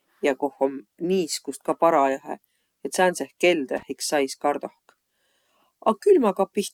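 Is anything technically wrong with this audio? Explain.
Yes. There is loose connector crackle from 3.77 to 3.83 s in this speech. A worn or dirty contact briefly lost and regained connection, chopping the signal for about 56 ms. It sounds like a short, irregular scratchy burst of crackle.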